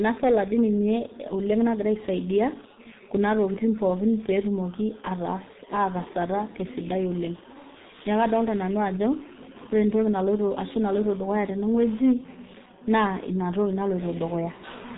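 From start to finish, the speech carries heavy G.723.1 codec damage. The codec runs at about 6.3 kbit/s, far too little to carry a full voice. It keeps nothing above 3.8 kHz, so the top of the sound is simply gone. Its voice model updates slowly, in coarse frame-sized steps. The result is muffled and hoarse. Consonants smear together and lose their edges.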